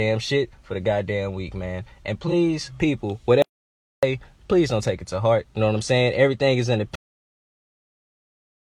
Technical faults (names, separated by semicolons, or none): AAC frame loss with concealment; audio dropout to silence; cut-off end